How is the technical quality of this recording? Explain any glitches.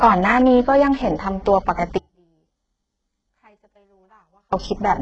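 Technical quality is poor: the speech is heavily degraded by coding throughout, and a long section drops out almost completely.

Throughout, the treble sounds synthetic, with gritty, lispy sibilants and no content above 8 kHz. That points to HE-AAC compression, likely at a very low bitrate around 8 kbps. The codec rebuilds the upper band from copied lower bands, so its harmonics don't match the real ones.

From 1.98 s to 4.53 s, about 2.55 s, the speech abruptly cuts away, leaving only a faint trace roughly 40 dB below normal before it snaps back. This is an audio dropout to a faint residue. The signal was likely lost while the downstream path stayed live.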